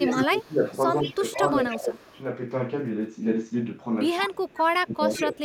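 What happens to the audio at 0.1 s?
At 0.1 s the speech is being pulled down by speech suppressed in double talk, running from 0.0 to 0.63 s. The sound dips by roughly 15 dB, likely because an echo canceller mistook near-end talk for loudspeaker echo during overlap. On a waveform the envelope caves in abruptly.

An echo leak is also present at that moment, spanning 0.07 to 2.19 s: a faint copy of the speech trailing by 156 ms, sitting about 15 dB under the main signal. The likely cause is a loudspeaker-side canceller leaving residual pickup that gets sent back. Spectrogram harmonics appear doubled with a short lag.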